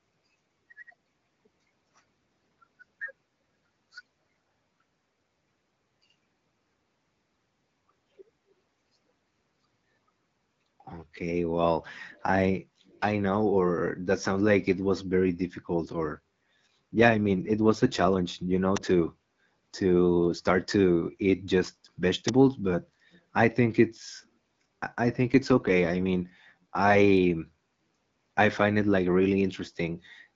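Around 12.1 to 12.23 s and again at 12.86 to 13.01 s there's a faint echo leak: a very quiet copy trailing 198 ms behind, likely from a speakerphone whose echo canceller missed some. From 15.76 to 18.21 s and 25.19 to 26.96 s, an AMR rate drop makes the speech rougher and more synthetic, which fits a step from 12.65 down to 8.85 kbit/s.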